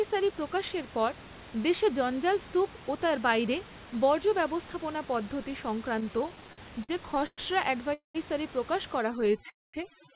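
Right after "ব্যবস্থাপনা পদ্ধতি", from 6.0 to 7.4 s, repeated stalls (stutter) set in. Late packets drain the jitter buffer 14 times, with gaps up to 112 ms. The filled gaps make the speech drag and stutter.

From 7.94 to 8.17 s, a call audio freeze adds about 0.2 s, mostly silent. Packets were likely held up in transit.

Overdone noise removal runs from 8.99 s to the end. The background drops to twinkling near-silence.

From 9.21 to 9.42 s, four brief stalls of up to 10 ms cause a stutter. From 9.50 to 9.76 s, a second freeze inserts about 0.24 s of mostly silent gap.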